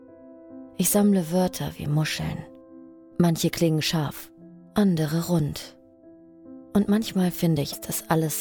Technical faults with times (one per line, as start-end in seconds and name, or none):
7.72-7.75 broken MP3 bit reservoir